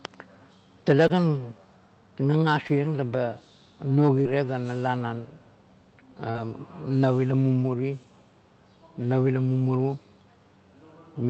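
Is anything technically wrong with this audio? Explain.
Yes. The speech has short concealed packet loss at 1.07 to 1.11 s, 2.67 to 2.71 s, 4.21 to 4.27 s and 6.31 to 6.36 s. About 20 ms went missing in the first two and 40 ms in the last two. The receiver extrapolated the preceding sound to cover each gap, which is heard as a brief smear or wobble. On a spectrogram, each spot shows a blurred patch. In the waveform it appears as an unnaturally regular stretch. The audio passed through an Opus call path, and its content tops out near 8 kHz.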